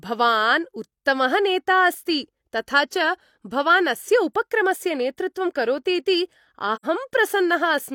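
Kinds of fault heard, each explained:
AAC frame loss with muting: Right after "नेतृत्वं करोतीति" the speech drops into a short hole from about 6.75 to 6.85 s. The decoder lost a stretch of the stream and filled it with silence by zeroing the spectrum, so the sound fades out and back in across the overlapping windows rather than snapping off. The gap runs around a tenth of a second, which fits two lost frames, and its edges sound soft and rounded.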